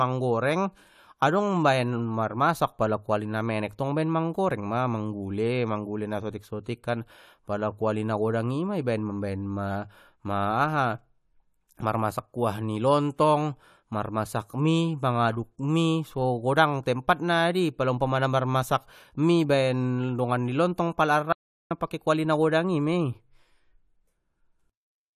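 Speech, with one audio dropout to silence at 21.33 to 21.71 s, just after "dongan ni lontong pala" and before "pake kuali na godang". For about 0.38 s the signal falls to silence, with no room tone or noise floor, then resumes mid-flow. That total blankness separates it from a gated pause or a level dip, where some background would survive. The likely cause is lost input, such as a brief disconnect or mute, while recording continued writing silence.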